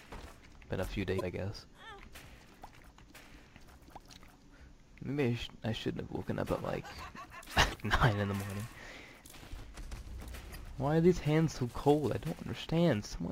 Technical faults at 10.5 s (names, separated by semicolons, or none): damaged data in a compressed stream